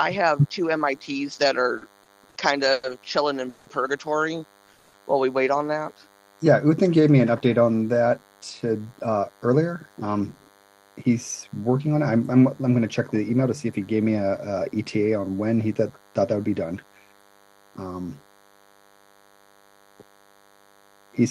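A thin, steady buzz runs under the whole clip. It is DECT cordless phone buzz. A nearby DECT handset or base sends a radio burst every 10 ms, and the audio circuit rectifies it. That gives a 100 Hz buzz with many harmonics, at about 35 dB below the signal.

From 1.77 to 2.85 s the sound stutters. These are repeated stalls. Packets kept arriving late, so the jitter buffer ran dry four times. Each gap was filled by stretching the last sound, the longest for 110 ms. About 260 ms was filled in all.

At 3.49 to 3.68 s, and again at 4.72 to 4.95 s, the audio hangs on a fading buzz or hiss. Each is a call audio freeze. The sound holds for 170 ms, then 210 ms, before resuming where it stopped. Packets held up in transit are the likely cause.

Between 5.84 and 6.35 s the audio drags at the same pitch. This is a jitter buffer slow-down. The receiver repeated single pitch periods to rebuild its reserve. 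That adds 70 ms and plays at 88% speed, with drawn-out sounds.

From 8.08 to 11.95 s everything sounds hurried but keeps its pitch. This is a jitter buffer speed-up. The buffer held too much audio, so the receiver cut short pieces to reduce delay. It plays at 110% speed and drops roughly 0.4 s in total.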